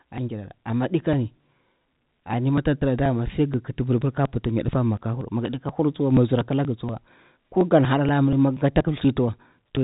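Periodic USB or driver dropouts run from 0.18 s to 9.77 s, roughly every 0.24 s, about forty in all. Each time the audio path stalls and around 10 ms of speech is skipped, leaving regular ticks within the telephone-band audio, which stops near 3.8 kHz.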